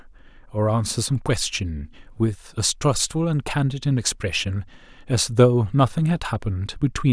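Nothing in this recording trips any alarm, and it's just speech running along with no faults to point to at any moment.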